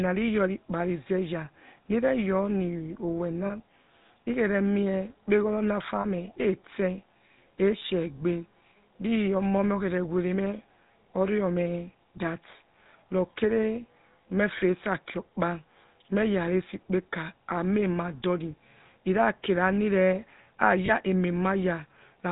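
Throughout, the speech has a buzzy, gravelly roughness with nothing above 4 kHz. This is plainly audible damage from the GSM full-rate codec, which models the vocal tract and drives it with a coarse, regularly spaced pulse excitation, consistent with a 13 kbps stream.

Brief rough, metallic rings replace the speech at 3.46–3.51 s and 6.00–6.05 s, each about 40 ms long, and again at 20.86–20.91 s for about 20 ms. These are lost GSM frames. The decoder reused the last good frame's settings, which fits two dropped frames, two dropped frames, and then one.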